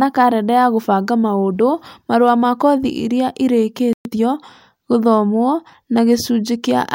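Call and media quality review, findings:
Playback stall, 3.93 to 4.05 s: speech cuts to silence mid-flow for 120 ms, then resumes. Output side, player/render thread. Likely buffer underrun or blocked thread starving the output, so nothing is written until data returns.

Time-compressed catch-up, 4.05 to 4.17 s: speech hurried at 2x, pitch unchanged. Player jitter/buffer logic. Backlog from the stall is drained by dropping short segments and cross-fading the joins.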